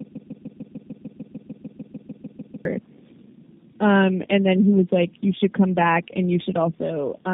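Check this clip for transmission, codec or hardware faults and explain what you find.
Two faults are present: a repeating loop at the start, and tandem coding damage across the whole clip.

Broken-record loop, 0.0 to 2.65 s: a fragment of about 149 ms, already repeating when the clip opens, plays back to back 17 times. The likely cause is a stall that kept resending the last held fragment, so the speech for that span is lost.

Tandem speech coding, throughout: the speech passed through three low-rate speech codecs in a row, consistent with an AMR-NB stage followed by two G.729A stages. Each coder degraded the previous one's output, leaving a rough, muffled, warbly sound with nothing above 3.7 kHz.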